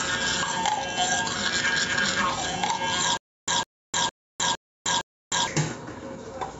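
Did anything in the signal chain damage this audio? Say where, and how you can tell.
Yes. Gain pumping runs through the whole clip, with the level swinging by roughly 5 dB. Loud and quiet moments are pressed close together and everything feels squashed. This points to the input stage: the microphone gain was likely set far too high, and a fast limiter or compressor keeps clamping down on every peak and releasing in the gaps.

From 3.17 s to 5.47 s there is a stutter with silent gaps. A burst of about 153 ms plays, then about 307 ms of dead digital silence follows, and the pattern repeats every 460 ms, five times in all. The rigid timing and true silence place this in playback or buffering. The stream likely stalled, replayed its last fragment at each retry, then ran dry. The audio that belonged in that stretch is gone, and the call processing leaves nothing above 8 kHz.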